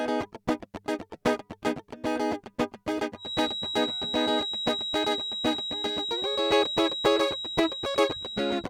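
Feedback whistle from 3.15 s to the end of this music clip: a thin 3.8 kHz tone that swells and fades slowly, a few decibels under the music, likely a loudspeaker-to-microphone loop hovering at the edge of feedback.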